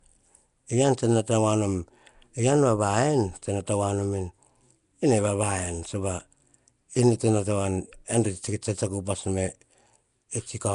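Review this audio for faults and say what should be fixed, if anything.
Throughout the speech, a rough, hissy halo and a smeared, underwater texture cling to every syllable, and nothing reaches above 10.6 kHz. This is likely Nellymoser compression, and the damage fits a bitrate near 44 kbps. It differs from MP3 swirl because starved bands are refilled with noise, so it hisses rather than warbles. To prevent it, capture or export with a modern codec such as Opus or AAC at a generous bitrate instead of Flash's microphone codec.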